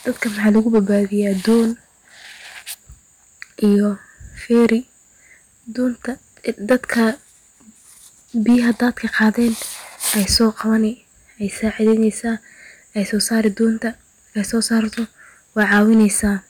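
Speech with hard clipping throughout: the level is pushed about 6 dB past what a stage can pass, so a small share of samples, around one to two percent, have their peaks sliced flat, giving crackle on loud syllables. The waveform shows flat-topped peaks, and the spectrogram shows vertical smears of high-frequency energy at those moments.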